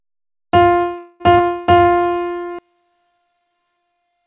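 A recording of everyday sounds, carried over a call path whose codec removes everything above 4 kHz, consistent with G.711 A-law at 64 kbps. From 0.98 to 1.22 s a call audio freeze holds the last sound as a fading buzz for about 218 ms, likely because delayed packets emptied the jitter buffer. Unlike a dropout, nothing is lost: the audio resumes exactly where it stopped, so the stall only pushes everything later. At 1.38 to 1.41 s the opposite happens, a skip ahead: playback jumps forward with a barely perceptible join of about 11 ms, and roughly 70 ms of sound simply never plays. This is not a freeze, because almost no filler is heard and the material afterwards arrives early rather than delayed. Between 1.72 and 2.03 s a jitter buffer slow-down stretches the sound to about 79% speed, adding 77 ms by repeating tiny pitch-period slices. The pitch stays put, which separates it from a tape-style slowdown where everything drops in tone. 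From 2.59 s to the end one channel is inverted: when the stereo is folded to mono the shared content cancels and the level falls by about 32 dB. That leaves only a faint residue of the differences between channels, likely caused by a polarity flip rather than a mute, because that faint ghost of the sound remains instead of true silence.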